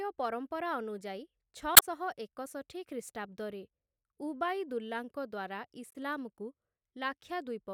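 At 1.74–1.83 s and 5.91–5.96 s, damaged data in the compressed stream makes the decoder misread frames and lose sync, producing brief glitches.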